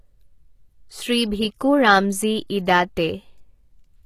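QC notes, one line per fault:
Throughout: HE-AAC compression. The treble sounds bright but synthetic, and nothing is present above 14.9 kHz. Sibilants come across gritty and lispy, and the upper band has a metallic sheen that does not follow the lower harmonics. This is likely spectral band replication: only the lower spectrum is properly coded, and the top is rebuilt from copied lower bands under a coarse envelope. The plainly audible damage fits a bitrate around 20 kbps.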